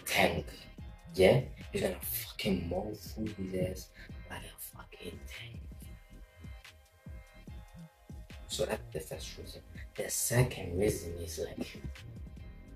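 Digital radio blending to analogue at 5.58 s: a 117 ms cross-fade to FM adds faint hiss without any gap or level jump, reversing at 11.57 s.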